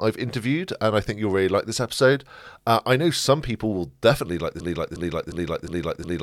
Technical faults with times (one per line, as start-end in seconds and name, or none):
4.60-6.22 broken-record loop